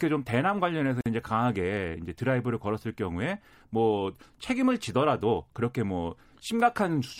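At 1.01 s the speech drops out for about 48 ms, ending at 1.06 s, a gap at a join of encoded pieces. Two separately encoded segments were butted together without trimming, so the first piece's end padding and the second's start-up delay both remain as silence. It sounds like a brief stutter in otherwise flowing speech, resuming exactly where it left off. On a waveform it shows as a flat notch with smeared edges; a spectrogram shows a clean vertical blank stripe, edges slightly blurred by the codec.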